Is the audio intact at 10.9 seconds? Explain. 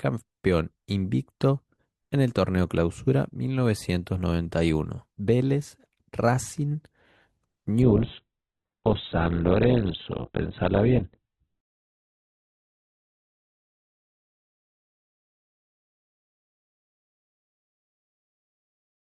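No. At 10.9 seconds the speech sits inside an adaptive stream at a lower bitrate, from 7.82 to 11.82 s. A slowed connection switched to a leaner encoding, likely near 8 kbit/s, so treble vanishes abruptly and artefacts rise. A spectrogram shows nothing above 4.2 kHz, while the waveform has no gap.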